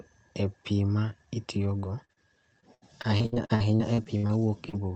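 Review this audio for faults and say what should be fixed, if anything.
Short concealed packet loss occurs four times, at 1.80–1.84 s, 2.04–2.11 s, 2.13–2.18 s and 4.69–4.75 s. Each time, roughly 20 to 40 ms of audio did not reach the decoder in time. The receiver covered each gap by extending the preceding sound, continuing its pitch through voiced parts and substituting shaped noise elsewhere, then blending back into the real signal. Each gap is heard as a brief smear or wobble. The two close together near 2.1 s can blur a short consonant.

Repeated packet loss (robotic sound) runs from 2.60 to 4.31 s. Fourteen separate gaps fall inside that stretch, the longest about 70 ms, and together they total roughly half a second. The decoder keeps re-extending the last sound, and before it can recover the next gap arrives. As a result, about 29 percent of that span is synthesized rather than received, which gives it a choppy quality with pieces missing. 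The call path's 8 kHz upper band limit, consistent with Opus at around 32 kbps, applies throughout.

To prevent this, improve the network route's stability or allow a larger adaptive jitter buffer, and enable in-band forward error correction so that isolated lost packets can be rebuilt instead of concealed.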